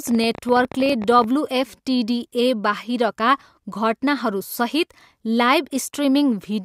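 From 0.07 to 1.25 s a train of clicks runs under the speech, about 20 clicks per second at an uneven pace, peaking about 5 dB above the signal. Likely cause: interference from nearby equipment or a faulty connection or power supply. On a spectrogram they appear as thin vertical broadband lines, and on the waveform as sharp spikes of similar shape.

At 0.9 s, during that run, an overlap between stream segments cuts roughly 12 ms of audio at a boundary between segments, which fits 2-second segments. The waveform jumps abruptly instead of continuing smoothly, producing a tiny skip. A spectrogram shows a single vertical line at the splice.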